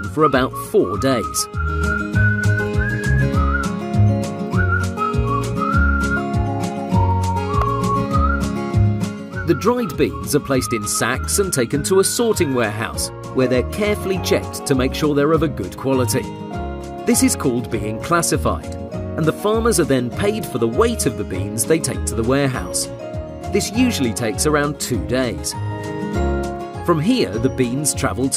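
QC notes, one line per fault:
7.62 s, repeated buffer: a block about 1.45 ms long, which fits a 64-sample buffer, is played two extra times, so the same tiny piece sounds three times in a row with a hard join at each repeat. The playback path ran short of fresh audio and replayed its last buffer instead, displacing about 3 ms of the sound. With a buffer this small, the repeats come across as a click or brief buzz rather than an audible stutter.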